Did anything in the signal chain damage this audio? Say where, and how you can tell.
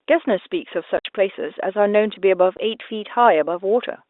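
Yes. Speech cuts to dead silence with hard edges at 0.97–1.05 s and 2.57–2.59 s. This is network packet loss filled with silence, with hole lengths fitting 10 ms packets.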